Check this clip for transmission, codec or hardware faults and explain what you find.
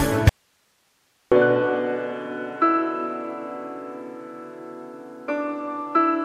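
Audio dropout to a faint residue, from 0.29 s to 1.32 s: the wanted sound disappears abruptly for about a second and returns just as suddenly, with nothing but hiss filling the gap at roughly 45 dB below the normal level. The likely cause is a brief loss of the incoming signal while the path downstream stayed powered and live, so its own noise floor carried on. The hard edges at both ends distinguish it from a natural pause or a fade.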